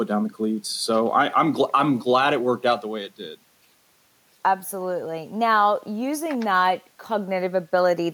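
Listening to this speech recording, nothing stood out as a technical problem at any point.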